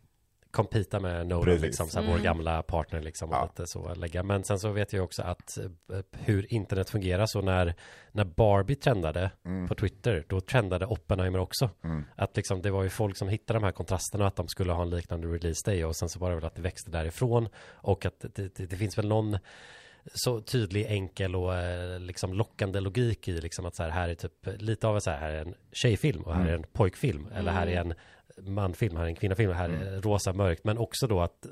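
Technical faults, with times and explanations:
No technical faults are audible anywhere in the speech.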